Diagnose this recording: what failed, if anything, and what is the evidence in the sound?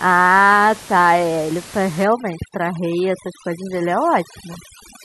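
Overdone noise removal in call processing, from 2.04 s to the end. A suppressor set too hard mutes bands near its noise estimate, so room noise about 18 dB below the speech drops and breaks up into twinkling specks. A spectrogram shows isolated dots.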